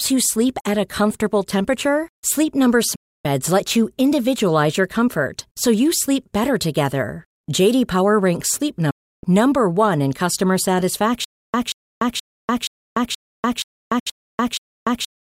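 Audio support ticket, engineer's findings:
Digital broadcast dropout at 2.95–3.26 s, 8.90–9.24 s and 13.99–14.07 s. The audio mutes in about 8 ms and returns after 288 ms, 320 ms and 64 ms respectively. That content is gone. The receiver muted on failed or missing frames; the gap lengths fit whole 32 ms frames.

Stutter with silent gaps from 11.24 s to the end. A 181 ms fragment repeats every 475 ms, followed by 294 ms of digital silence, eight times; the 13.99 s dropout falls inside it. Likely a stalled player or stream replaying its last buffer on each retry, then running empty. The intervening audio is lost.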